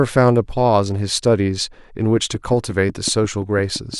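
From 2.17 s to 3.95 s, something is likely injecting a pulse into the signal path at a steady rate of 5.65 per second, such as interference from nearby equipment or a faulty connection or power supply. The result is a train of clicks: roughly ten evenly spaced ticks of much the same shape, standing out a few decibels above the speech and audible both over it and in the gaps between sounds.

At 3.09 s, within that run of clicks, the program likely failed to read its samples before the hardware overwrote them, causing a dropped buffer (overrun). A very short stretch of audio, around one and a half milliseconds, is lost, and the samples on either side are butted directly together with no silence in between. This produces a tiny skip forward in the speech. The gap is too brief to take away any syllable.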